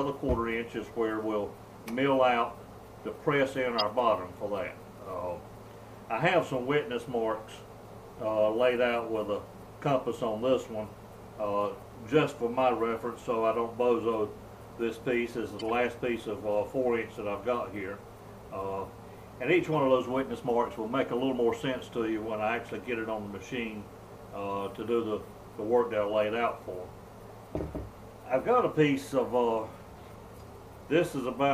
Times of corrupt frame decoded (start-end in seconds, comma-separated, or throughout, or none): 3.78-3.84, 15.59-15.70, 19.74